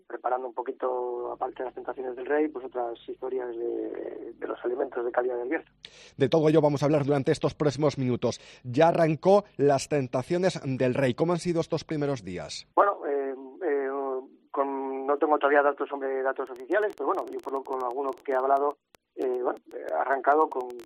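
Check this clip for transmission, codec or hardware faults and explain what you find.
There's one fault here: a train of clicks from 16.47 s to 20.85 s, right at the end. Around fifty pulses arrive at roughly 10.5 per second, spaced unevenly, each peaking at about the level of the sound itself. It's likely interference from nearby gear or a faulty connection or power supply, injecting near-identical spikes. You hear it as a ragged ticking riding over everything, and it doesn't let up in the gaps either.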